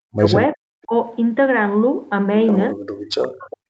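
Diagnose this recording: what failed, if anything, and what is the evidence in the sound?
Call processing failed: the speech is cut by about 40 dB at 0.00–0.33 s, 0.54–0.66 s and from 2.72 s to the end, and by about 25 dB at 0.84–0.93 s. The waveform collapses in blocks, and the spectrogram dims or loses its high end. The likely cause is speech suppressed in double talk, with the echo canceller muting the near talker as the far end spoke.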